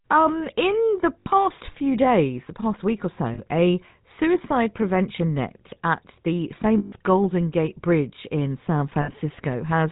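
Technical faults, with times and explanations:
Throughout, GSM full-rate codec: the speech sounds buzzy and gravelly, with nothing above 4 kHz. The vocal tract is modelled and driven by regularly spaced pulses built from only every third excitation sample, at 13 kbps, so the roughness is plainly audible.
1.2 to 1.27 s, lost GSM frames: after "in the", 60 ms of sound hangs as a rough metallic ring before "few days the past". Missing frames were filled by repeating the last good frame's settings, which gives a frozen, ringing buzz.
3.34 to 3.4 s, lost GSM frames: a 40 ms metallic smear sits between "the past week or" and "a suicide prevention net". The last good frame was repeated, so the sound is held briefly instead of moving on.
6.78 to 6.93 s, lost GSM frames: the longest gap, 140 ms after "prevention net at the". The repeated frame rings metallically, because the last good frame's settings are held for the length of the loss.
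9.02 to 9.11 s, lost GSM frames: a 60 ms rough, ringing hold near the end. The last good frame's settings were reused, giving the same brief metallic sustain heard in the earlier losses.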